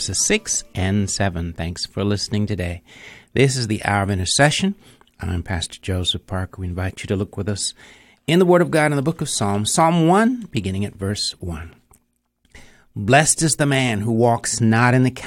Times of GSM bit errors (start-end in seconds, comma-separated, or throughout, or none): none